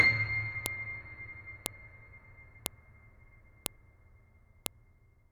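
Sharp clicks at 0.66, 1.66, 2.66, 3.66 and 4.66 s, exactly 1.0 s apart regardless of the music, mark a file header played as audio at each joined WAV piece, not random glitches.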